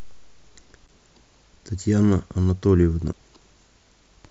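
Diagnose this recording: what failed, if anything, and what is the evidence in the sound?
The codec stage failed: damaged data in a compressed stream. Brief garbled bursts at 0.85–0.89 s and 3.10–3.15 s mark corrupted frames the decoder misread before regaining sync. On a spectrogram each appears as a short broadband smear breaking the speech harmonics; the waveform shows a jagged discontinuity.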